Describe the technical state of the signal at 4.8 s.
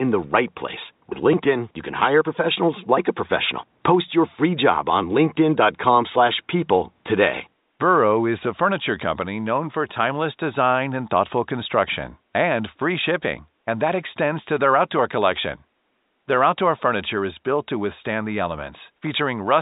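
At 4.8 s the signal is intact, with only faint room noise far beneath the speech and the narrow telephone band of G.711 coding.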